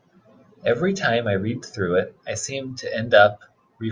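No technical faults can be heard in this recording.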